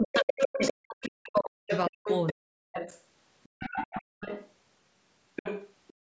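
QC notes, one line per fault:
0.0–2.8 s, speech suppressed in double talk: the talker's speech dips and breaks up over about two seconds, at worst by roughly 40 dB. This is likely an echo canceller unable to separate the talker from loudspeaker echo while both sides spoke, so it pulled everything down.
0.31–1.1 s, 1.7–2.33 s, 2.76–3.01 s, 3.43–4.5 s and 5.36–5.93 s, other side's voice leaking through: a second, fainter voice sits under the talker, roughly 5 to 15 dB down. The likely cause is loudspeaker playback reaching the microphone and not being fully cancelled.
4.02–4.2 s, background gated by the echo canceller: the canceller clamped the microphone while the loudspeaker played, so the room sound drops out by about 35 dB for around a fifth of a second, then returns when it releases.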